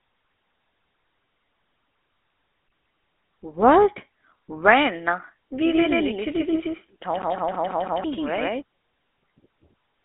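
The whole clip runs through the GSM full-rate codec. The band is cut to roughly 300 Hz to 3.6 kHz, so the speech sounds thin and boxed in. Over that sits a buzzy, gravelly roughness. The codec rebuilds the speech from a vocal-tract model driven by sparse, evenly spaced pulses, and the coarse excitation leaves this grit on the voice. The damage is plainly audible. It fits a 13 kbps GSM full-rate stream.

From 2.68 to 3.33 s the sound behaves like a CD stuck on one turn. A slice of 164 ms plays four times over. Each jump back has a tiny mute. The result is a fast, even, mechanical stutter. The player keeps landing on the same spot of the disc before it moves on.

From 5.65 to 8.62 s there is a doubled audio track. A second copy runs about 150 ms behind the first, at about the same level. It is full band, with no decay and no room tone, so it is not an echo. It starts and stops abruptly. The likely cause is a second capture path or an edit that left two copies out of step.

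Inside that stretch, from 7.22 to 8.04 s, the CD skip comes back. The same 164 ms loop repeats five times, with the same clicks of silence.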